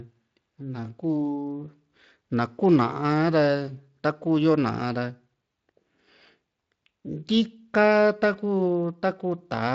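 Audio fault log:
No faults are present, and the speech carries the light coding of a Speex path working as designed, with its content ending near 7.6 kHz.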